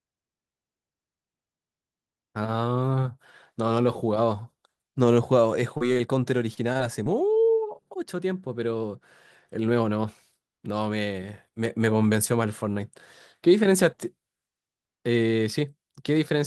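A speech recording with network packet faults. At 5.77 s there is a short concealed packet loss: about 20 ms never arrived, and the decoder patched it by extending the previous sound, leaving a brief smear. At 5.93 s and again at 5.98 s come short stalls from a late packet. The jitter buffer ran dry, so the last sound was held for 31 ms and then 16 ms, with 12 ms later trimmed to catch up. From 6.54 s to 7.38 s there is repeated packet loss (robotic sound). Five gaps, the longest 27 ms, were each filled by continuing prior audio, giving a choppy stretch with pieces missing.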